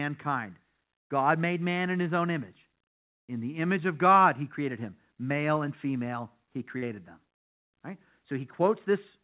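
At 6.78 to 6.84 s there is a short concealed packet loss. About 40 ms of the speech arrived too late to decode. The receiver patched the gap by extending the preceding sound, then blended back. It is heard as a brief smear. Throughout, the narrowband call sound stops at 4 kHz, which fits G.711 mu-law coding.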